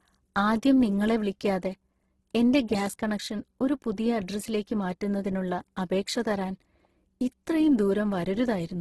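Across the whole speech clip the sound is rough and grainy rather than swirly, with nothing above 12.2 kHz. This is likely Opus compression working in its music (CELT) mode at a very low rate, one that fits roughly 12 kbps. Short of bits, the encoder keeps each band's energy but refills the detail with folded copies of lower bands or with noise, so the damage is heavy, and harmonic detail turns hissy and coarse instead of clean.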